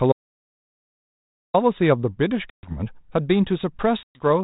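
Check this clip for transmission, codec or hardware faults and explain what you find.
The clip has three faults: one long dropout to silence and two packet-loss holes on what sounds like a G.726 ADPCM call at 32 kbit/s, with light codec damage and nothing above 4 kHz.

Audio dropout to silence, 0.12 to 1.54 s: the speech cuts off abruptly and about 1.4 s of digital silence follows, with no room tone underneath. That points to the input being lost while recording continued, likely a disconnected device or failed link. Whatever was said there is gone.

Packet loss on an ADPCM call, 2.50 to 2.72 s and 4.03 to 4.26 s: each has a hard-edged silent hole, about 130 ms and 120 ms of lost audio. The decoder's adaptive predictor and step size then fall out of step with the sender's, so speech resumes briefly distorted before settling.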